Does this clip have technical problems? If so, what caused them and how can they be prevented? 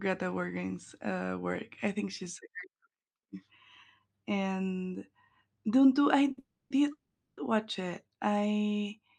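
Yes, there are two kinds of fault, both just before "watch it I" in this speech.

First, a short stall from a late packet at 6.31 to 6.39 s. A packet wasn't there when it was due, so the jitter buffer ran dry and the receiver held the last bit of sound for about 60 ms until it showed up, then carried on from the same spot. Nothing's lost, it just drags with a faint buzzy hold. A slightly deeper or adaptive jitter buffer would absorb a delay that small.

Then right on its heels comes a call audio freeze at 6.39 to 6.72 s, and a second one at 6.92 to 7.39 s. The likely cause is packets getting held up in the network long enough to empty the buffer completely. The receiver stretches the last sound into a fading buzz that drops to silence, about 130 ms of it in the first freeze and 120 ms in the second, then resumes where it stopped. That puts roughly 310 ms and 450 ms of extra gap into the audio without dropping any of it. 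Prioritising the voice traffic with QoS, or moving off a congested or flaky link such as busy Wi-Fi, would stop packets bunching up like this.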